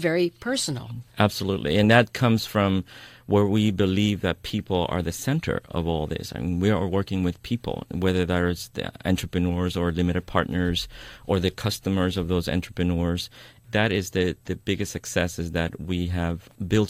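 Listening to this speech recording, nothing stood out as a technical problem.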